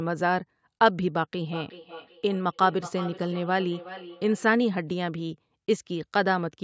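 A second device replays this microphone back into it, causing feedback echo between two devices from 1.48 to 4.56 s: ringing repeats come roughly every 0.4 s, about 15 dB below the speech.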